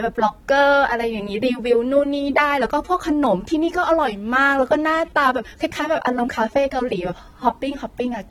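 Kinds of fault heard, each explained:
AAC compression: The speech is dull and smeared throughout, with a warbling, fizzy texture on sustained sounds and sibilants. This is likely low-bitrate AAC-LC coding, consistent with around 32 kbps, where high bands are cut and spectral gaps or substitute noise appear.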